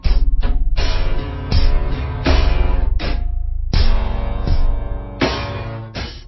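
From start to end, the clip has a wrong sample rate fault. Audio recorded at 44.1 kHz is played back at 16 kHz with no conversion. Everything runs at 0.363 times normal speed. Pitch falls by about 17.6 semitones. The sound is very low, slow and dragging.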